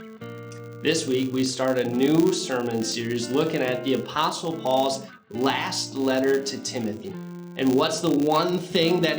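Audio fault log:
Throughout: filter restarted on every block. Its state is cleared every 10 ms, so each block starts with a small transient, giving a 100 Hz buzz that tracks the level.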